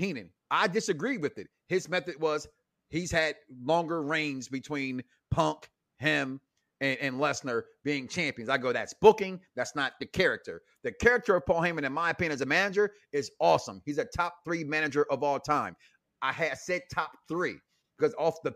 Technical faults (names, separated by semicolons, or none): none